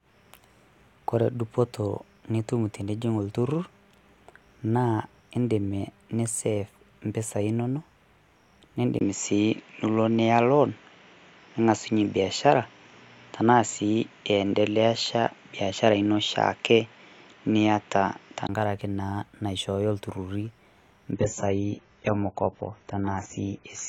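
At 8.99 s, just before "naa naishooyo ilturruri", a 20 ms gap is followed by a duller, boxier tone with nothing above 7.6 kHz, a small level shift and a faint new noise floor. This is likely an input switched to a poorer device. The original sound returns at 18.49 s.

From 21.12 s to the end at 23.89 s, the treble again stops at 7.6 kHz and codec artefacts rise, with no gap at the transition. This is an adaptive stream at a lower bitrate, consistent with AAC falling from about 96 to 16 kbit/s as the connection slowed.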